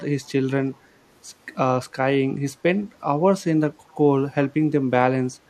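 At 0.23 to 0.30 s and again at 3.87 to 3.92 s, a brief, very faint echo leak appears: a copy of the speech about 40 dB down, trailing by 382 ms. Likely cause: a far-end speakerphone whose echo canceller let residual pickup through.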